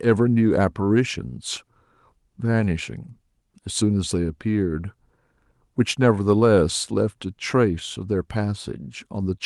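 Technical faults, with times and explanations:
Nothing to flag in this speech clip: it came over a normal Opus call path, and the usual coding character and the 12 kHz top end are just what that link normally sounds like.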